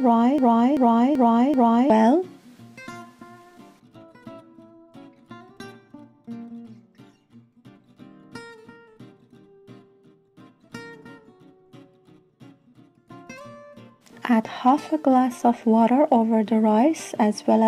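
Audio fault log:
0.38–1.90 s, broken-record loop. A fragment of about 0.38 s plays, then repeats back to back, four times in all. Each pass is identical, so it comes round like a stuck groove. The sound that belonged in that span never arrives and is lost. The likely cause is a stalled player, encoder or stream that kept resending the last fragment it held. At 1.90 s the loop breaks and the audio continues.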